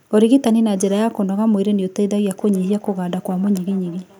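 From 2.28 s to the end of the speech, a feedback echo between two devices creeps in: each word comes back roughly every 0.4 s, thinner and ringier on each pass, peaking at about 25 dB below the voice. What's happening is a second device in the same room playing this call out loud, and the first mic hears it again. The echo canceller only knows its own playback, so the repeats slip through.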